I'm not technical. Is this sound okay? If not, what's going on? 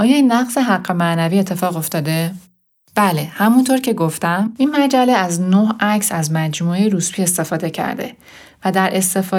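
No. Pre-emphasis left on, from 1.59 to 3.86 s: the treble was boosted, as FM radio does before sending, but never turned back down afterwards. So the speech there sounds thin, overly bright and hissy, with sharp S sounds.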